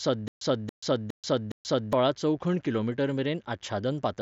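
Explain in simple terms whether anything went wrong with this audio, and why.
A faint mains buzz runs through the whole speech, a steady rasp at 50 Hz plus its harmonics, picked up from the power supply or poor shielding.

From the start until 1.93 s there is a stutter with silent gaps: a 0.28 s fragment repeats four times, each followed by 0.13 s of silence, likely from a stalled stream.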